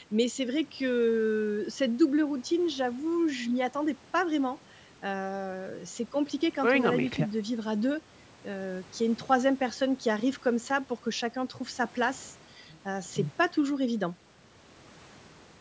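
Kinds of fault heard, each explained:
Nothing to flag here, just speech that's been through a call's microphone processing, which trims the deepest bass and leaves nothing above 8 kHz, exactly as that kind of path is meant to.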